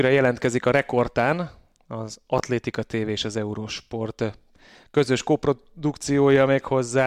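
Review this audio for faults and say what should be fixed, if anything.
A brief jumbled stutter occurs from 2.38 to 2.40 s. This is chunks out of order: one 10 ms chunk arrived one chunk late and played after its neighbour, so the sound is complete but swapped, with three abrupt joins. To prevent it, sequence-number each chunk and reorder in a jitter buffer before playback or writing.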